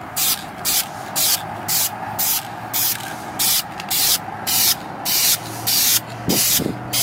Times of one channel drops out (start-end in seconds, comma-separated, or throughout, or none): none